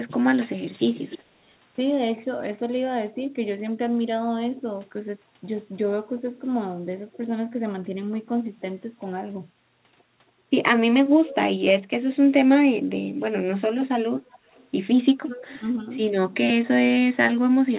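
At 0.94 to 1.19 s, a faint delayed copy of the speech comes back, about 15 dB below the talker. This is an echo leak. The far end likely plays the call on a loudspeaker, and its echo canceller missed part of what its microphone picked up. The copy trails by about 0.3 s. It returns briefly at 11.28 to 11.35 s, about 20 dB down, and again at 14.19 to 14.68 s, barely audible at around 30 dB down.

From 15.19 to 15.62 s, the talker's level dips sharply, by up to about 25 dB, over roughly a third of a second in total. This is speech suppressed in double talk. Both sides likely spoke at once. The echo canceller likely could not tell the talker from loudspeaker echo, so it turned everything down. Throughout, the audio carries nothing above 4 kHz, which fits a narrowband telephone codec.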